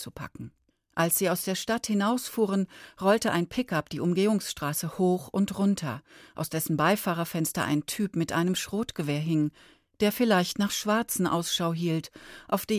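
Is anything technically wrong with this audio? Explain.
No, nothing is technically wrong.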